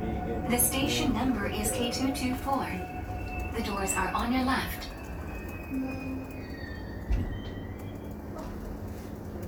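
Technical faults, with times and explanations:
No technical faults are present in this sound.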